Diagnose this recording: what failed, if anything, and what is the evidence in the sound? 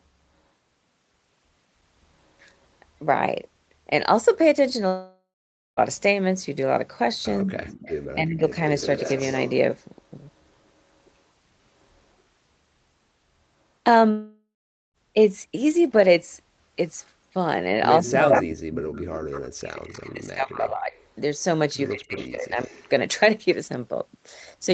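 Network stage: long network dropout at 4.87 to 5.80 s and 14.11 to 14.97 s. A fading buzzy fill turns to silence, and about 0.9 s and 0.8 s are lost, likely from packet loss.

Call processing: speech suppressed in double talk at 7.44, 18.00, 19.50 and 21.92 s. The sound dips by up to about 40 dB, likely because the echo canceller muted both talkers.

Call processing: echo leak from 7.57, 18.05, 20.56 and 21.87 s. A copy trails by 148 ms, about 5 to 35 dB down, likely from incomplete echo cancellation.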